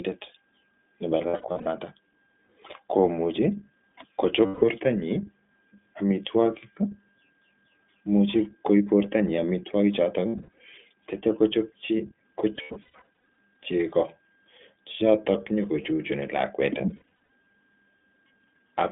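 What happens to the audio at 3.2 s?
At 3.2 s the speech carries iLBC codec damage, present across the whole clip: nothing passes outside about 200 Hz to 3.6 kHz, and each 20 ms frame is coded on its own, leaving a plainly rough, synthetic buzz that fits a bitrate near 15 kbps. A plain telephone filter would dull the sound without that grainy roughness.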